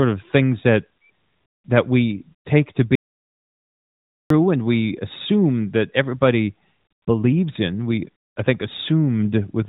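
From 2.95 s to 4.30 s the speech drops out to silence for about 1.35 s, likely from a lost input or a stray mute while recording continued. Unlike a natural pause, even the room tone vanishes, and the speech stops and resumes abruptly.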